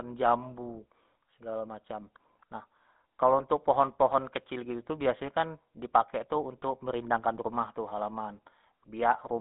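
Throughout the speech, the GSM full-rate codec is plainly audible: a buzzy, gravelly roughness from its coarsely pulsed excitation, consistent with 13 kbps full-rate GSM. Plain telephone band-limiting would leave voices smooth within the 150 Hz to 3.7 kHz band, with nothing above 3.8 kHz.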